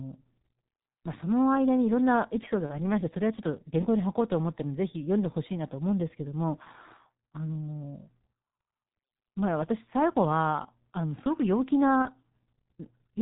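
Throughout the speech, the G.723.1 codec leaves everything above 4 kHz missing and a hoarse, muffled grain that fits its 6.3 kbit/s rate. The damage is heavy. Consonants smear because its 30 ms frames update the voice model slowly.

At 2.66 to 2.80 s and again at 12.02 to 12.11 s, VoIP packet loss concealed by the speech codec turns the voice into a brief stretched, fading sound rather than a silent gap. Each gap fits one lost 30 ms frame, and the voice stays weak or distorted past the gap as the decoder rebuilds.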